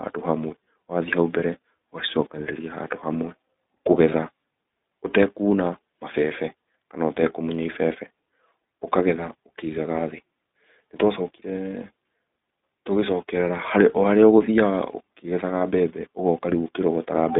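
Throughout the clip the speech has passed through the iLBC codec, a narrowband VoIP coder that treats each short frame on its own. The line carries roughly 200 Hz to 3.7 kHz, so everything above that is gone and the low end is thinned. Codec damage is plainly audible: the voice stays intelligible but sounds rough and slightly synthetic, which fits iLBC's 20 ms mode at about 15 kbps.

At 15.58 s a single 20 ms frame is lost in transit. With nothing to decode, the iLBC decoder fills the slot by repeating the last pitch cycle blended with noise. For that instant the sound smears into a brief held, faintly buzzy tone instead of moving on. Because the next frame decodes without depending on the missing one, the voice snaps back almost immediately.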